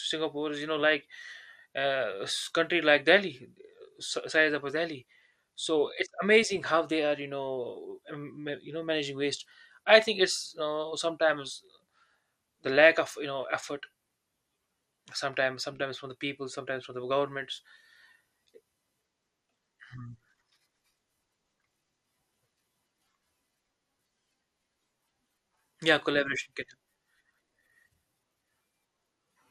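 Throughout the speech, upper frequencies flicker in and out and what remains sounds coarse and gurgling, likely MP2 compression at a rate that fits about 80 kbps. Unlike a simple low-pass, the lost bands switch on and off unpredictably, leaving granular, watery distortion.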